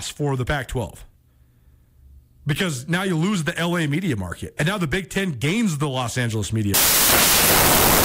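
Speech recording in which the samples are built from the wrong bytes from 6.74 s to the end: misassembled sample bytes turn the low-order bits into dominant values, replacing the signal with broadband noise.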